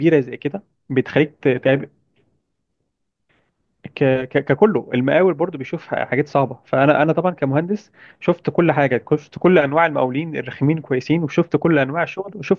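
Nothing here stands out as a technical fault; the speech comes across steady and intact the whole way, with no dropouts, glitches or other disturbances to point to.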